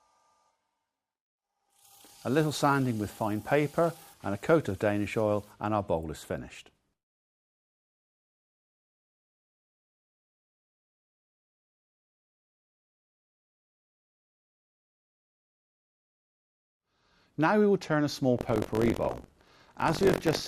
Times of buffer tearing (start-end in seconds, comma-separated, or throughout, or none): 18.37-20.48